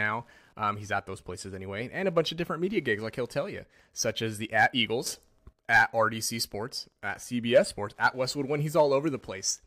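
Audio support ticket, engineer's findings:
Steady ticking under the speech throughout, roughly ten clicks per second. Repeat period 102.4 ms. Level about 40 dB below signal. Wi-Fi interference. Nearby Wi-Fi radio beacons picked up by the analogue input stage, rectified into audible pulses.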